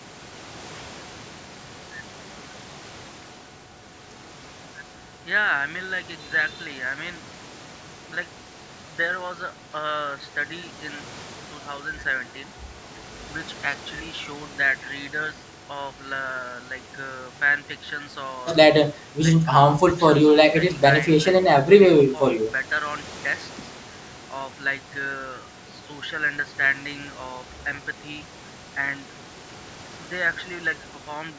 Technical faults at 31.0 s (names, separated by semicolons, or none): none